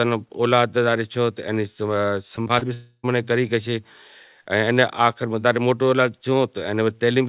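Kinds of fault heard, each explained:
Repeated packet loss (robotic sound): Small pieces of audio went missing several times in quick succession, and each hole was patched by stretching the last bit of sound. From 2.36 to 2.63 s the speech turns choppy, with four short holes, the longest about 46 ms. Roughly a third of that stretch is patched-over sound rather than real speech, all heard through a narrow band with nothing above 4 kHz.
Long network dropout: From 2.73 to 3.05 s, the speech is replaced by a continuation of the last sound that fades away, then a brief silence before the speech resumes. The likely cause is that no audio reached the receiver for about 0.3 s. The receiver filled the gap by extending what it last had, and that portion of the speech is lost for good.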